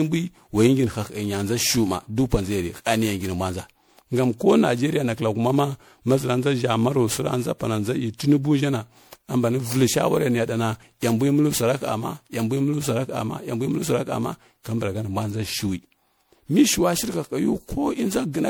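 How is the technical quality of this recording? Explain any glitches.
The recording has one clear, persistent fault: generation loss across the whole clip. The audio has most likely been run through a lossy MP3 codec around ten times, decoded and re-encoded at a rate that fits 96 kbit/s. Each pass quantises the speech again on a shifted frame grid, so noise and spectral gaps pile up. The result is swirly, hollow and smeared, worse than a single 96 kbit/s pass would sound, with consonant attacks blurred. Content stops at about 20.7 kHz.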